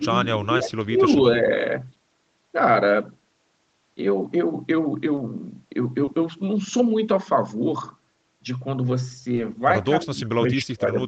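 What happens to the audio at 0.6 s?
A short concealed packet loss sits at 0.57 to 0.61 s. About 20 ms of the stream failed to reach the decoder in time, and the receiver filled that gap by extending the preceding sound, following its pitch where voiced or substituting shaped noise where not, then blending back into the real signal. At this point the speech takes on a brief smear or wobble, and a short consonant here could drop out.

This happens within a longer stretch of speech suppressed in double talk, from 0.24 to 1.05 s. The level dips unevenly by as much as about 10 dB, for roughly half a second in total. The likely cause is the echo canceller mistaking the talker for loudspeaker echo while the far side was also speaking, so it turned the talker down along with the echo.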